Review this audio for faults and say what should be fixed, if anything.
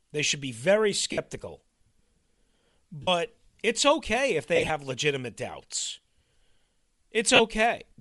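The speech has a grainy, breathy edge throughout. This is likely Bluetooth LC3 compression at 48 kbps. Raising the LE Audio bitrate would prevent it.

Lost LE Audio frames cause brief dropouts at 1.12–1.18 s, 3.02–3.08 s and 7.35–7.40 s. A scattered patch also occurs at 4.56–4.70 s, with its longest gap about 30 ms. The decoder refills each gap by reusing the last spectrum with random signs. A stronger, less congested Bluetooth link would prevent these dropouts.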